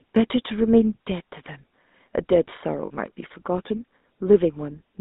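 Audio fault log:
Throughout, GSM full-rate codec: a buzzy, gravelly roughness sits plainly on the speech, and the band is squeezed to roughly 200 Hz to 3.7 kHz. The vocal tract is modelled and driven by sparse regular pulses, which fits 13 kbps full-rate coding.
2.86 to 2.91 s, lost GSM frames: for about 40 ms the sound holds on a rough, metallic ring instead of moving on. The last good frame's settings were repeated to cover the gap, which fits two dropped frames.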